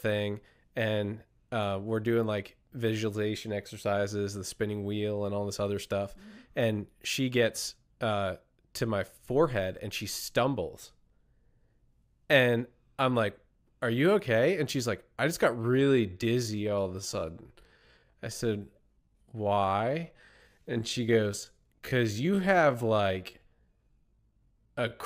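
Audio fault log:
15.55–25.05 s, time-stretched section: from just after "like I just got" through the end of the clip, past "amount of negative energy", the pace drops abruptly to roughly 0.68 times the earlier rate while pitch stays unchanged. The slowed passage drags. This is likely pitch-preserving stretch processing that lengthened the audio by repeating short overlapping segments to fill a longer duration.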